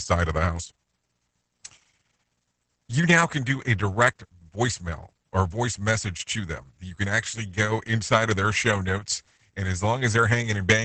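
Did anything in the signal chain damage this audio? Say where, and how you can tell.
Yes, at the codec stage: heavy Opus voice compression runs the whole clip. Nothing's left above 8.8 kHz, and the speech sounds muffled, hoarse and a bit robotic, which fits SILK in wideband mode coding the excitation coarsely at something like 10 kbps.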